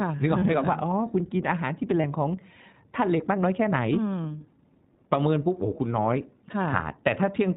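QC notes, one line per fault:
throughout: iLBC codec. The sound is band-limited, with nothing above 4 kHz, and has a plainly audible rough, slightly synthetic edge. iLBC codes each frame's excitation independently, and the character fits its 20 ms, 15.2 kbps mode.
0.40–0.43 s and 2.02–2.04 s: lost iLBC frames. Each gap of about 20 ms becomes a brief held, faintly buzzy or breathy tone. The decoder repeats the last pitch cycle mixed with noise, and because frames stand alone, the voice is right again almost at once.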